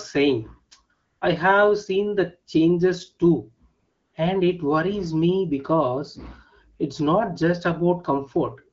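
At 0.93 to 1.21 s and again at 3.79 to 4.13 s you get AMR comfort noise: the phone judged the talker silent, stopped sending speech frames, and the receiver filled the gap with a smooth synthetic hiss.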